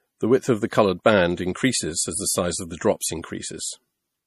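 MP3 compression is the likely cause of the damage heard throughout the speech. Nothing reaches above 14.8 kHz, where the encoder cut the treble, and weak frequency components flicker between frames, giving a plainly audible watery swirl that fits a rate around 40 kbps.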